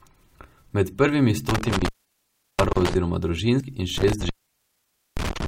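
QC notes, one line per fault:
1.49 to 2.95 s, intermittent contact. The speech cuts out for about 0.71 s as a loose connection opens, with crackle at both edges and faint hiss underneath.
2.73 to 2.76 s, gap at a join of encoded pieces. A 26 ms gap breaks the sound. Separately encoded pieces were joined untrimmed, leaving encoder delay and padding in.
3.98 to 5.48 s, intermittent contact. The line opens again for about 0.88 s, crackling at the break and leaving faint hiss while disconnected.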